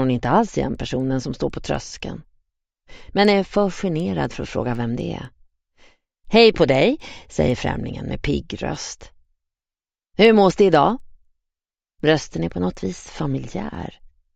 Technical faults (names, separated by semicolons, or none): resampler restarted on every block